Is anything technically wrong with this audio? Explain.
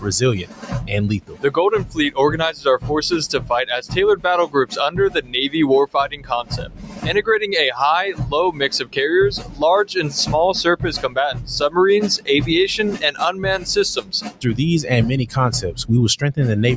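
Yes. A noise suppressor applied to music or sounds runs through the whole clip. A suppressor tuned for speech treats sustained tones, ambience and reverb as noise and keeps pulling them down, so the level swings by around 10 dB as it grabs and releases. Attacks get through while held material and tails sink, giving a pumping, thinning quality. On a waveform the envelope breathes unevenly. On a spectrogram, steady bands fade and recover in blotches, all beneath the 8 kHz ceiling that the call's microphone processing leaves.

Sound cut by the noise suppressor shows up as eight distinct dips: 0.4–0.91 s, 1.2–1.47 s, 2.52–2.87 s, 4.47–4.75 s, 5.17–5.34 s, 6.11–7.06 s, 9.37–9.62 s and 14.0–14.45 s. At each one the suppressor misjudged the sound as noise and attenuated it by about 9 to 16 dB, the deepest near 14.0 s. Sustained or decaying parts sink in level or end abruptly. The waveform shows sudden hollows, and the spectrogram shows darkened vertical patches with truncated decays.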